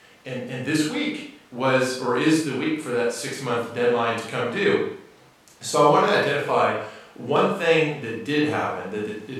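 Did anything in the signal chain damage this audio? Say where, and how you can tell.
No, nothing in the chain damaged this speech.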